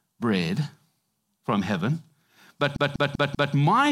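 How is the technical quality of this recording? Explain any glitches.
The speech has one clear glitch, a CD stuck on one turn. From 2.76 to 3.54 s, the same short slice of speech repeats four times. Each loop lasts about 0.19 s. A scratch on the disc throws the laser back one track at the same point on each rotation. So the player keeps rereading that stretch. You hear a fast, even stutter, with a brief mute at every jump.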